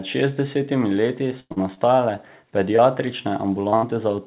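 Just after "šestdesetimi leti", a burst of packet loss runs from 1.40 to 1.52 s. About 100 ms of audio never arrived, so the receiver stretched the last sound and faded it out, ending in roughly 40 ms of silence before the sound resumes further on. On a waveform this looks like a decaying, repetitive stretch that drops to a flat line. On a spectrogram the last sound's energy smears horizontally and fades to a blank column.

Straight after it comes short concealed packet loss from 1.52 to 1.58 s, about 40 ms filled in. More of these follow at 1.74–1.79 s, 2.17–2.21 s, 2.76–2.80 s and 3.70–3.74 s, each covering about 20 ms. Each is a brief smear or wobble where the gap was patched from the preceding sound and blended back in. A spectrogram shows short streaks of copied energy, and a waveform shows short repeated stretches that blend into the surrounding audio.

A second burst of packet loss follows at 3.76–3.85 s, with about 60 ms missing and held over, again as a stretched, fading segment before the sound jumps ahead.

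The spectrogram is empty above 4 kHz throughout, which points to a narrowband G.711 call codec.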